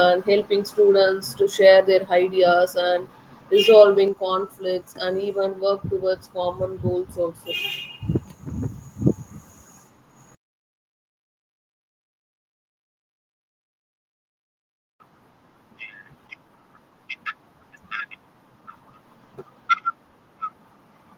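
At 4.08 s the speech and the background behind it drop together by about 5 dB in a single step, a microphone volume stepped down, likely the call software lowering the device's input level. The change is instant and then holds, unlike a gradual fade.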